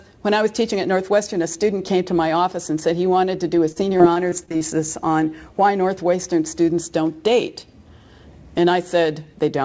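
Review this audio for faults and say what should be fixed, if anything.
Repeated packet loss (robotic sound) runs from 3.72 to 4.62 s. Seven gaps, the longest 40 ms, get papered over by stretching the previous sound, leaving that stretch choppy with about 18% concealed. A steadier network link or a deeper jitter buffer would keep packets arriving in time. The G.722 call path at 64 kbps carries nothing above 8 kHz.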